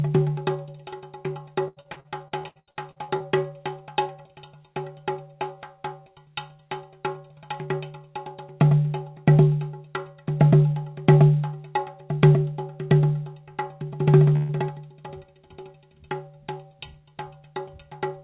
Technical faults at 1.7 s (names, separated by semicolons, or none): repeated packet loss (robotic sound)